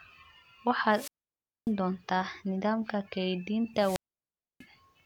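At 0.90 s and again at 3.76 s the speech suffers a wireless microphone squelch dropout. The FM radio link fades, hiss swells briefly, and the receiver's squelch cuts the output to near silence for about 0.59 s and 0.64 s respectively, before the speech resumes by 1.71 s and 4.64 s. On a waveform each shows as a flat gap. On a spectrogram a short burst of broadband noise precedes an almost empty band.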